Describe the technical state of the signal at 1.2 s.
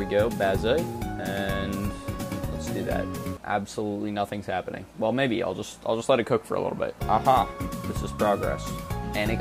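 At 1.2 s the signal is intact, with no audible fault at that moment.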